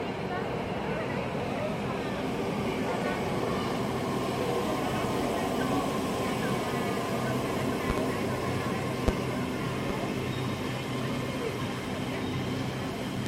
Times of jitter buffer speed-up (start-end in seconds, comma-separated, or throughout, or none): none